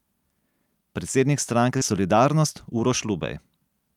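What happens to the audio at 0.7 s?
Nothing goes wrong at 0.7 s: the audio runs on intact through that moment, with no dropout, click or distortion.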